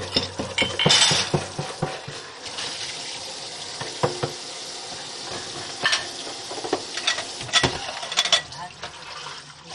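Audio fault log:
Throughout, MP2 compression: dull, gurgling, granular sound with nothing above 12.5 kHz, likely from starved Layer II sub-bands dropped and coarsely quantised, pointing to about 56 kbps.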